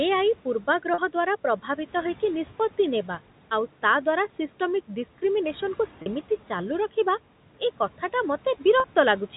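From the first second to the end, noise suppressor artifacts run under the speech. The suppressor pulls the room noise down by about 12 dB in the pauses and lets it back up beneath the speech, so the background pumps with the talking. On a spectrogram the noise floor shows as a patchy, speckled layer that darkens between phrases and fills in under each one.

At 0.94 s, 6.02 s and 8.8 s there is packet loss with pitch repetition. Each gap is 40 ms, which fits two lost 20 ms packets, and the receiver fills it by repeating the last pitch cycle. Each one sounds like a brief held, buzzy tone. In the waveform it appears as a short run of repeated, fading periods. On a spectrogram it shows as flat, evenly spaced harmonic lines where the speech had been moving.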